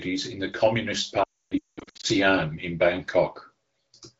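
From 1.23 to 2.06 s, lost AMR speech frames cause repeated dropouts as the wideband decoder extrapolates, then mutes, with the longest gap near 280 ms.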